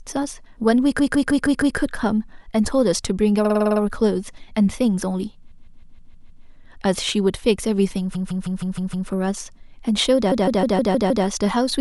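Short runs of compressed frames were written out more than once, so the decoder replays the same slice of speech several times in a row. These repeated frames occur at 0.98–1.77 s, 3.44–3.80 s, 5.50–6.44 s, 8.14–9.08 s and 10.31–11.25 s. Most loop a 157 ms block five or six extra times, which fits a run of six frames. The 3.44 s event cycles a 52 ms block seven extra times. Each is a mechanical stutter that stretches the clip by up to 0.94 s.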